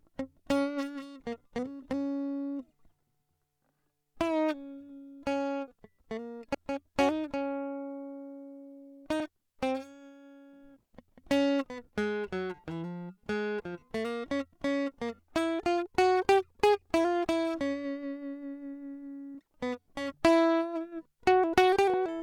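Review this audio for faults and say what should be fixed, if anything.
Compressed frames skipped at 6.54, 9.20, 19.34 and 21.94 s: the music jumps ahead, most at 6.54 s. Re-encode or repair the damaged file from a clean source.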